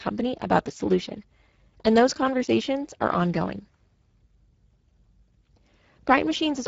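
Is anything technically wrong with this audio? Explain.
Yes. Throughout, the speech has Speex codec damage: too few excitation bits leave it hoarse and noisy, which fits roughly 10 kbps, and nothing survives above 7.7 kHz.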